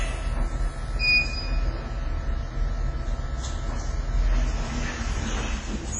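Throughout, the audio was likely squeezed through WMA compression at a low bitrate, around 24 kbps. Long transform blocks smear quantisation noise into a ringing, washy haze with a hiss that swells and fades with the sound, and nothing survives above 10.4 kHz.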